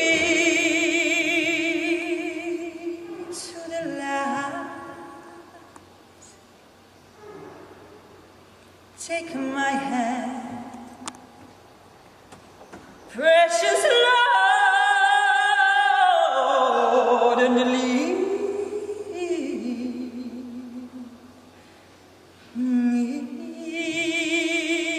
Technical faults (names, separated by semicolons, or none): repeated buffer